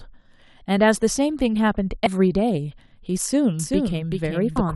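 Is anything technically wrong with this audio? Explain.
Yes. There are two kinds of fault in this speech clip.

Between 2.03 and 2.07 s there is a brief glitch. A shorter blip follows at 4.56 s. Both are damaged data in a compressed stream. Bytes in the encoded file were corrupted or lost at those points, so the decoder misread the affected frames, lost sync and searched for the next valid frame header.

From 3.59 s to the end, a second copy of the speech trails the first by around 400 ms, about 5 dB quieter. It starts abruptly and has no reverberant decay or room colouring, so it is not an echo from the space. This is a doubled audio track, most likely the same signal mixed in a second time through a slower capture path or an edit that left two offset copies.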